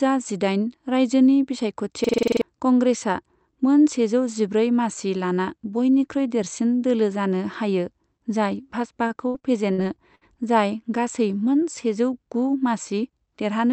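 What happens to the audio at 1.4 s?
Nothing goes wrong at 1.4 s: the speech passes through intact, carrying only the steady narrowed top end and light coding texture of the call path that runs through the whole clip.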